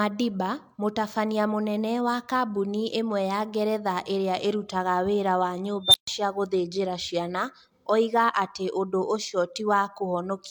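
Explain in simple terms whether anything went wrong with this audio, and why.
An unstable filter failed in the processing. A feedback filter fed its own output back until it ran away and reset. After "ĩrĩa ĩrutaga wĩra wa", at 5.85 s, a high tone around 4 kHz swells over about 90 ms. Then the sound cuts out for about 135 ms, until "cia gũthenjera ciana oiga" at 6.07 s.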